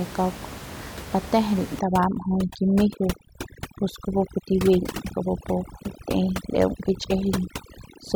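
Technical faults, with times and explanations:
1.79 to 8.15 s, overdone noise removal: the denoiser shuts bands near its noise estimate, leaving twinkly specks where room noise was and taking quiet parts of the voice with them.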